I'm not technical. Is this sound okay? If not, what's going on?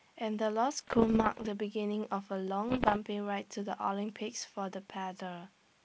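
No. This speech has bit errors on an ADPCM link. It was sent in a compressed digital form, and some of its bits got flipped along the way. Each wrong bit confuses the decoder for a few milliseconds, so you hear pops, rough crackly bursts and quick jumps in loudness. It happens from 0.77 to 1.48 seconds, and again from 2.69 to 2.98 seconds. The second patch is a little worse, with slightly more bits damaged.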